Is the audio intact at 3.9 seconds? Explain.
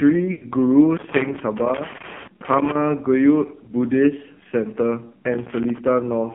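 No, at 3.9 s you're hearing the AMR narrowband mobile codec, which runs through the whole clip. The line band sits roughly between 150 Hz and 3.4 kHz, and a vocal-tract model fed by only a few pulses leaves the speech buzzy and synthetic, which fits a very low bitrate around 6 kbps.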